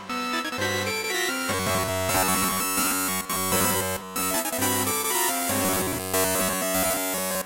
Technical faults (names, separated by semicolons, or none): robotic sound from repeated short buffers